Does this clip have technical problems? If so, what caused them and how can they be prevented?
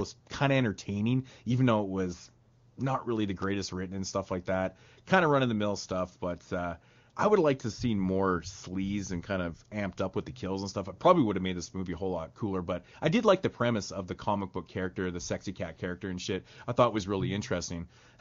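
No, nothing in this speech recording stood out as a technical problem on listening, so there is nothing here that calls for prevention.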